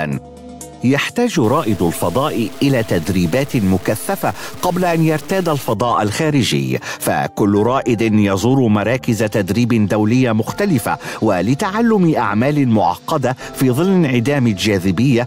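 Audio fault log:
1.44–5.73 s, low bit depth without dither: the sound turns grainy and gritty, with a rough distortion that moves with the signal and sits only about 25 dB below it. That fits a 5-bit signal that was truncated, likely with no dither to smooth the steps.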